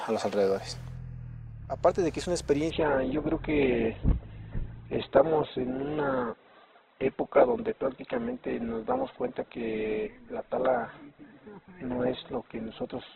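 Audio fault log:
2.70 s to end, adaptive stream at a lower bitrate: the sound abruptly turns dull, with nothing above 4.1 kHz and no gap. The stream dropped to a leaner encoding as the connection slowed, which fits Opus falling from 64 to 8 kbit/s.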